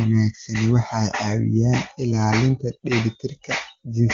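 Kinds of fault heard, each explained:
Nothing here counts as a fault: it's a speech clip carried over the AMR wideband (HD Voice) codec at its top rate of 23.85 kbit/s, where any coding damage is faint at most.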